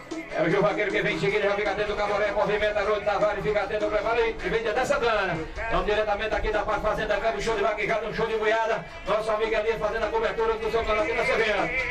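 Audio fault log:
No faults detected.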